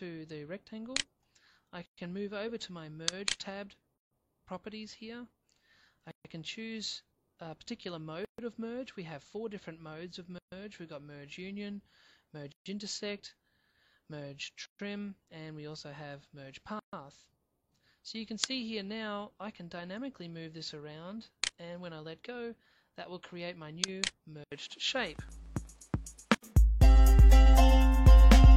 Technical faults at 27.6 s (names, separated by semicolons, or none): none